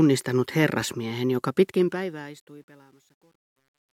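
From 1.6 s to the end, the speech fade-out carries truncation distortion. The fade stage drops low bits without dither, which fits a 10-bit stage. As the level falls, the waveform becomes coarse steps. From 2.3 s it sounds gritty.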